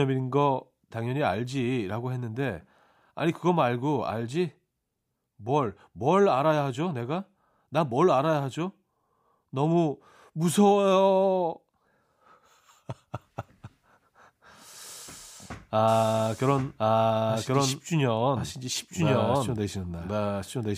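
From 15.88 s to the end, a doubled audio track appears: the speech repeats about a second late at roughly equal level, likely from a second, slower capture path, showing as a duplicated waveform abruptly offset.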